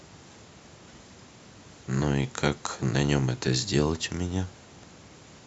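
No dropouts, clicks, distortion or timing faults occur anywhere in the clip; nothing to report.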